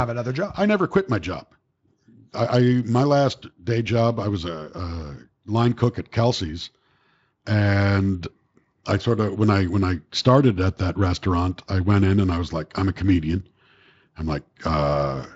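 There are no technical faults to describe in this speech clip.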